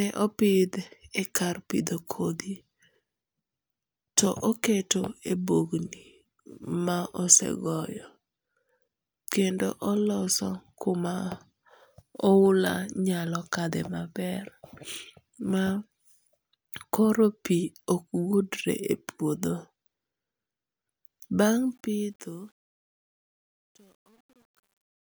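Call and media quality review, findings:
Truncation distortion on fade-out, 21.48–25.17 s: gritty, steppy tail, worst from 22.22 s to the end. Probable component: gain/fade stage requantizing without dither, which points to a 10-bit word length. Fade starting around 21.5 s.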